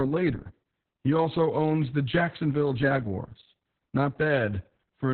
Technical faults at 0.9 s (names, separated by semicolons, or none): Opus voice compression